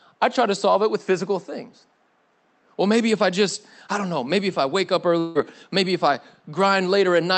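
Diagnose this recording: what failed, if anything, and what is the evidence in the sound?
The failure is at the network stage: a long network dropout from 5.19 to 5.38 s. For about 160 ms nothing new arrives, and the receiver drags the last sound out as a fading buzz that fills almost the whole gap before the speech resumes with that stretch missing. A capture-side mute would leave hard silence, and a single lost packet would be far shorter, so a network outage is the likely cause. The top end stops near 8 kHz, as expected from an Opus call path.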